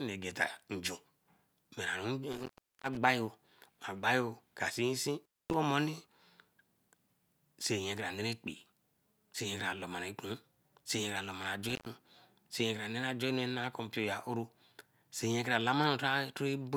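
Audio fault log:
2.32–2.97 s, 5.22–5.54 s, 11.69–11.86 s: intermittent contact. A loose connection opens briefly each time. The speech drops out for about 0.39 s, 0.23 s and 0.11 s. Crackle marks each break and reconnection. Faint hiss remains while the line is open.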